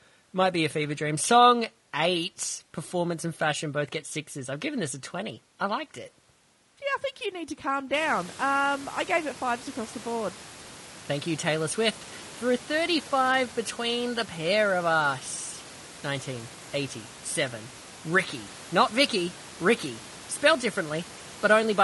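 Throughout the speech the voice sounds rough and grainy, with a hiss filling the gaps between harmonics and a thin, artificial top band. The likely cause is low-delay AAC compression, whose short frames blur pitch detail at a low bitrate, perhaps around 32 kbps. The room's own background noise rises by about 19 dB near 8 s, still sitting about 21 dB below the speech.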